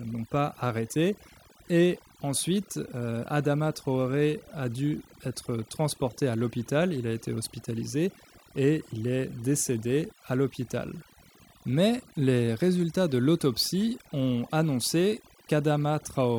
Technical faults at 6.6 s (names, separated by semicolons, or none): overdone noise removal